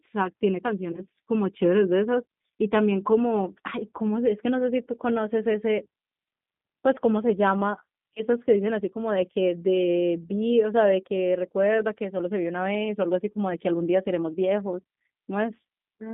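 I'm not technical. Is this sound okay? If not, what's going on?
No, it isn't. Two kinds of fault can be heard.

The whole clip has passed through the G.729 codec, a system that squeezes phone-call speech into very little data. It doesn't send the voice itself. It sends a rough recipe, and the far end rebuilds the speech from it. The words stay clear, but the rebuilt voice sounds slightly rough and artificial. The line also keeps only a narrow band, roughly 150 Hz to 3.6 kHz, so the speech sounds thin and boxy, like an old phone call.

There is also VoIP packet loss concealed by the speech codec, at 0.92 to 1.02 s and again at 8.14 to 8.23 s. Each time, about 20 ms of sound went missing in transit, which fits a single lost packet. The receiver guessed the gap by stretching the last bit of voice it had, so you hear a brief buzzy or noisy smear. The voice then sounds weak or blurred for a moment while it recovers.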